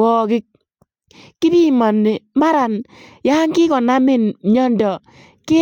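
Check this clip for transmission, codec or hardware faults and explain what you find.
Nothing in this speech recording points to a problem in how it was sent, encoded or captured. There is nothing to report at any point in the clip.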